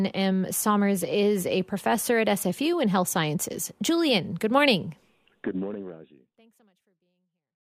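No technical faults can be heard in this speech recording.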